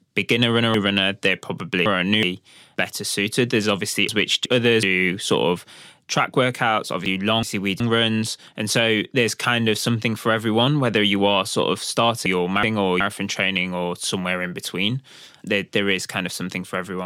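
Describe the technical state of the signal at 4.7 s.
At 4.7 s the audio is inside a chunks-out-of-order fault, 4.09 to 4.83 s. A 372 ms chunk plays one chunk late, leaving a jumbled swap with three hard joins.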